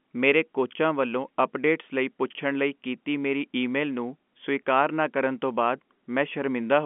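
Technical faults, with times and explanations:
Nothing here counts as a fault: the speech comes over an ordinary G.711 telephone line, so the sound stays inside the usual phone band with nothing above about 3.7 kHz, which is how that line is meant to sound.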